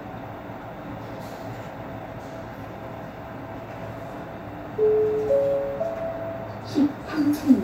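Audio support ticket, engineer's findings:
No faults found on this one, nothing in the sound that points to any component or mechanism needing attention.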